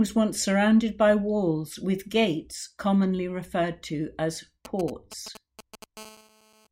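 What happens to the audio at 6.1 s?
At 6.1 s a GSM phone buzz is present, running from 5.97 to 6.67 s. A nearby 2G handset on a call pulses its transmitter 217 times a second, and the audio circuitry rectifies those bursts into a steady, raspy 217 Hz buzz rich in harmonics, about 24 dB below the speech.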